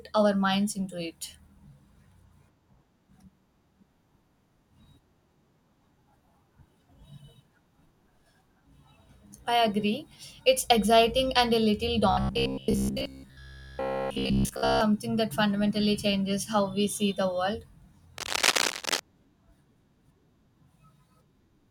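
From 12.11 to 14.81 s the speech turns into a rigid, metallic buzz pitched at about 66.8 Hz that only loosely tracks the words, the robotic sound from repeated short buffers. The likely cause is audio arriving too slowly, so the playback side keeps looping the last slice of roughly 15 ms to fill the gap. That fixed loop length imposes the buzz pitch, and most of the real audio in this stretch is skipped rather than heard.

Between 18.18 and 19.00 s a dense, uneven scratching and rustling sits over the speech at roughly the same loudness as the speech itself. This is cable scratch noise, likely from a worn cable, connector or control being moved so that its contact resistance jumps around rapidly. Each jump injects a burst of noise into the signal, and together they form the brief scraping texture that ends by 19.00 s.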